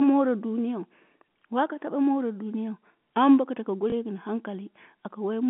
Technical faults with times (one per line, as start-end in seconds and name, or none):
3.90-3.92 packet loss with last packet repeated